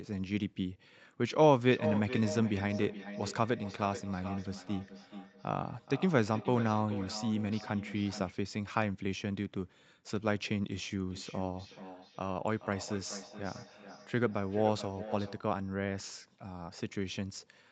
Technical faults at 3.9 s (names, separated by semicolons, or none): feedback echo between two devices